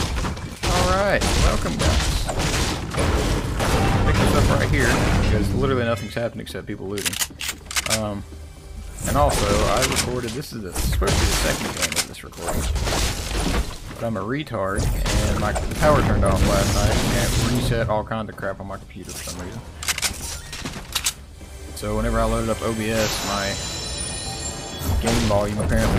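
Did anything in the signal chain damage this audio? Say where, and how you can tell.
No, nothing I can hear points to trouble at any stage of the chain, so there's nothing here to track down.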